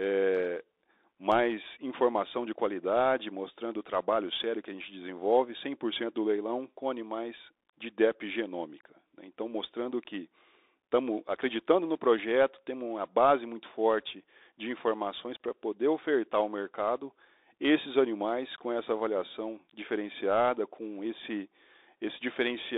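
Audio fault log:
throughout, Bluetooth CVSD headset codec: the speech is confined to roughly 300 Hz to 3.7 kHz, and on a spectrogram everything above 3.7 kHz is an empty band. One-bit up/down coding, which fits a 64 kbit/s stream, can't keep pace with fast loud transients, so s sounds come out scratchy and peaks look slope-limited on the waveform. A grainy hiss fills the gaps between phrases and shows as a speckled noise floor across the passband.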